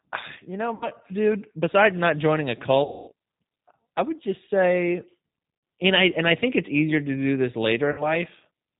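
Throughout, the G.729 codec at 8 kbit/s limits the speech to 4 kHz and rebuilds it synthetically, leaving a plainly rough, synthetic texture. VoIP packet loss concealed by the speech codec occurs at 0.75–0.89 s, 2.84–3.12 s, 5.57–5.63 s and 7.92–8.05 s; the decoder extrapolates then fades, smearing speech into a buzzy tone or coloured noise, longest around 240 ms at 2.84 s.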